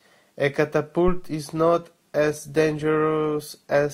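At 1.08 s something switched phantom power or another supply on a live input, and the sudden voltage step passed through the coupling capacitors into the signal path. This phantom power thump is a deep, low thud on the speech that dies away quickly, with a decay of about 47 ms, and the whole disturbance is over by 1.29 s.

From 1.48 s to the end of the clip, the adaptive stream switched to a lower bitrate, most likely because the connection slowed. The change is consistent with a drop from Opus at 64 kbit/s to about 24 kbit/s. The quality falls at once, with no gap or dropout. Codec artefacts rise and stay over the sound for the rest of the clip.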